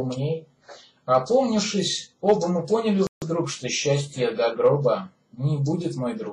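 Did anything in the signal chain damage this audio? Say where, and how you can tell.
Yes, a rebuffering stall at the playback stage: from 3.07 s to 3.22 s the sound drops to silence, then resumes exactly where it stopped, adding 150 ms. Because no audio is skipped, this is the player starving for data, not a packet-loss dropout.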